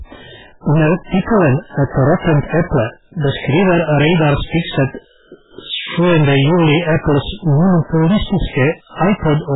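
From the start, hard clipping runs throughout: the speech is overdriven by about 17 dB, so roughly a third of the waveform is cut flat, producing harsh fuzz on every loud syllable. Also throughout, heavy codec damage leaves nothing above 3.8 kHz and a watery, swirling texture with smeared attacks, likely MP3 compression at a very low bitrate, around 8 kbps.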